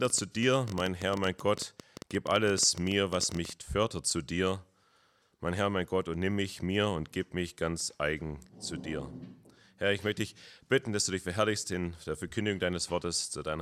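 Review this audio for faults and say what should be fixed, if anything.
Irregular ticking, a train of clicks at about 12 per second standing well above the sound, runs from 0.05 to 3.50 s, likely from electrical interference. Shielding cables, moving away from noisy equipment and checking the audio interface's connection should stop these pulses.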